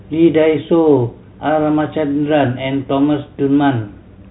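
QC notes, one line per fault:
No faults found; the speech carries the expected G.711 telephone band with nothing above 3.9 kHz.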